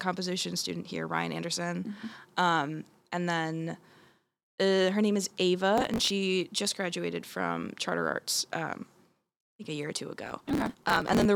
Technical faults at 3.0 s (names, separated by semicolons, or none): none